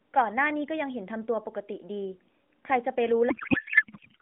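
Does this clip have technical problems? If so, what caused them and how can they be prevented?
Yes. From 3.30 s to the end at 4.22 s, a codec payload misread turns the AMR narrowband speech into garbled noise and warble that barely tracks it. Frames packed octet-aligned are unpacked as bandwidth-efficient, so every field lands in the wrong place. Unlike packet loss, nothing drops out: the garbage runs continuously. Prevent it by having both ends negotiate and use the same AMR payload format during session setup.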